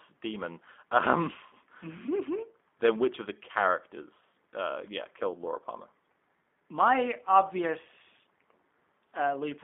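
From start to finish the speech carries G.729 codec damage, plainly audible. The sound is reduced to a vocal tract filter, a pitch estimate and a handful of pulses per 10 ms frame, a thrift that fits the 8 kbit/s G.729A variant. The result is rough and slightly synthetic. On a spectrogram, energy sits between about 250 Hz and 3.5 kHz with nothing above.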